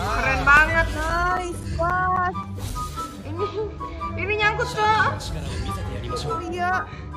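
From 0.57 s to 3.49 s there is a run of CD scratch ticks, twelve in all. Each is a tiny click or dropout, the longest about ten milliseconds. They come at a steady rate of roughly four a second. A scratch on the disc wipes out more data than the error correction can repair. The player patches or silences the lost samples on each turn of the disc.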